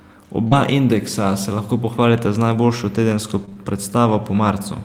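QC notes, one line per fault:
0.47–0.53 s, short concealed packet loss: About 40 ms of audio arrived too late for the decoder, so the receiver extended the preceding sound to cover the gap and then blended back into the real signal. It is heard as a brief smear or wobble.
0.51–0.53 s, lost packet rebuilt from error correction: One 20 ms packet was lost, but the next packet carried a low-bitrate copy of it, which the decoder played instead. There is no gap, but that stretch sounds rougher and noisier.
3.45–3.57 s, short concealed packet loss: Three losses in a row, at 3.45, 3.49 and 3.53 s, each left about 20 ms for the receiver to fill by continuing the last sound. Back to back, they make a longer smeared, wavering patch, and short sounds within it may disappear.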